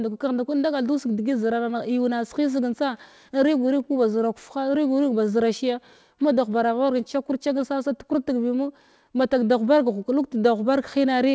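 Nothing here stands out as a fault: the speech has simply come over an ordinary call path, and nothing reaches above about 8 kHz, which fits a wideband call codec such as G.722 running at 64 kbps.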